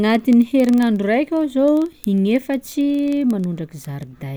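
From 0.10 s to 4.34 s the speech carries word clock ticks: sharp, uneven clicks about every 50 ms, roughly a hundred in all. The receiving device runs on its own clock, off from the sender's by something like 500 ppm, so each time the two drift a sample apart, one sample is dropped or repeated. Unlike random clicks or buffer dropouts, these ticks keep a steady rate throughout and leave no gaps in the sound.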